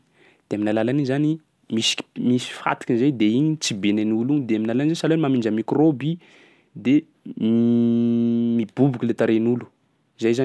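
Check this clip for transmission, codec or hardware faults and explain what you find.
Nothing faulty is audible anywhere in this speech recording.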